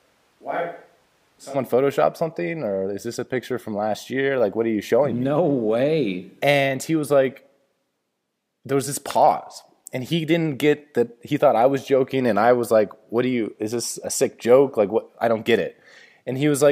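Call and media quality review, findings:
Speech roomy and hollow from the start of the clip to 1.53 s, thin low end, level about 10 dB down, room noise up to roughly 35 dB below the speech. Abrupt jump to close, full sound at 1.53 s. Likely switch to a distant microphone: close-mic feed missing for the opening, pickup taken from a far mic that hears more room reflections and background and less of the talker's bass, until the close mic cuts back in.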